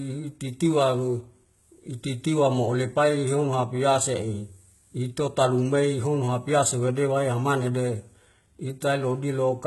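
Throughout, the speech shows heavy HE-AAC compression, likely at a bitrate near 16 kbps. Nothing sounds above 11.8 kHz. Copied-up treble makes s sounds gritty.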